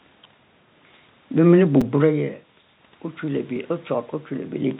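At 1.81 s and again at 3.57 s, fresh audio failed to reach the playback device in time, so it replayed its last repeated buffer, three times in a row at the first point and twice at the second. Each 5 ms fragment butts hard against its copy, producing a brief click-buzz rather than an audible stutter, with essentially no speech lost.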